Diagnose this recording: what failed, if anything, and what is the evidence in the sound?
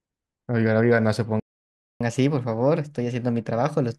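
Playback stall at the player stage: the speech stops dead from 1.40 to 2.01 s, about 0.61 s. That is likely a starved or blocked playback buffer.

Catch-up at higher speed, also at playback: from 2.01 s to the end the speech runs 1.1 times fast and about one and a half semitones sharp. Because it starts only after the stall, it is backlog resampling rather than a sample-rate mismatch.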